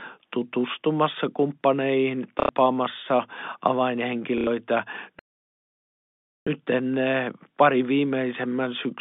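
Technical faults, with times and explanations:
2.4 to 2.49 s and 4.38 to 4.47 s, packet loss with last packet repeated: each time about 90 ms goes missing, which fits three 30 ms packets, and the last good one loops to fill it. The loop doesn't match the pitch, so you get a quick robotic buzz-stutter.
5.19 to 6.47 s, playback stall: the sound just drops to silence mid-flow for about 1.27 s, then picks back up. That's the player most likely starving for data or having its thread blocked, so nothing comes out until it recovers.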